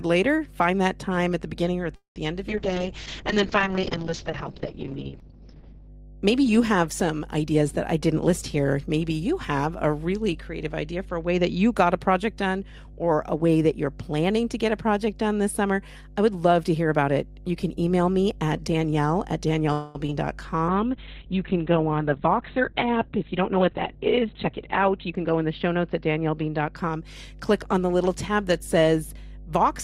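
A recording of speech carries mains hum throughout, a steady 50 Hz tone with some low harmonics, sitting only about 10 dB below the speech, which points to a ground loop or a nearby transformer feeding the power line into the signal. On a spectrogram it shows as an unbroken horizontal line at 50 Hz with fainter lines at its multiples, and on the waveform as a constant low ripple that fills even the pauses. The first call audio freeze runs from 1.95 to 2.18 s, between "the beginning or at" and "the end of". The last sound is drawn out as a fading buzz that drops to about 130 ms of silence, and the speech then resumes where it stopped, with nothing lost but 0.2 s of added delay. A second freeze at 19.73 to 19.97 s holds the sound for 0.22 s without falling silent. Both likely come from delayed packets emptying the jitter buffer. They appear as smeared, flattened stretches on the spectrogram, the first ending in a blank gap. 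A call bitrate drop from 32 to 6 kbps spans 2.50 to 5.96 s, and the audio turns rough and muffled as the encoder, starved of bits, cuts the bandwidth from 20 kHz to 6 kHz. A second drop from 20.68 to 26.82 s falls to 7 kbps and cuts the bandwidth to 4 kHz. On a spectrogram the upper region goes abruptly empty above those cut-offs, and the remaining energy looks blocky. The jitter buffer speed-up runs at 7.45 to 8.94 s at 108 percent speed, trimming about 150 ms. It appears again at 12.15 to 13.56 s, between "that you got a" and "that you're planning to", at 106 percent with about 100 ms removed, and at 21.90 to 25.26 s at 106 percent with about 200 ms removed. In each case the receiver drains excess buffered audio by cutting out pitch periods, so the speech sounds hurried at unchanged pitch. The waveform shows compressed syllables while the harmonic spacing stays the same. Short concealed packet loss occurs at 20.07 to 20.10 s and again at 20.10 to 20.13 s, just after "me at danielle at", where about 20 ms went missing each time. 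The decoder bridged the holes by extending the preceding sound, heard as a quick smear or wobble and seen as a brief blurred patch in the spectrogram.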